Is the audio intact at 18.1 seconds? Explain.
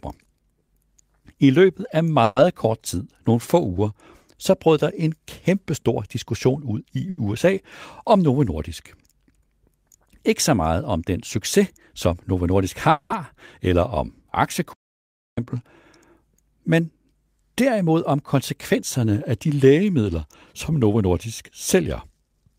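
No. At 18.1 seconds the speech is inside a jitter buffer speed-up running from 16.15 to 18.77 s, just before "af de lægemidler som". The receiver had built up more audio than it targets, so it trimmed out short slices of one or a few pitch periods, over and over, to bring the delay back down. About 150 ms was removed, and the speech plays at 105% speed with its pitch unchanged, which is enough to sound hurried.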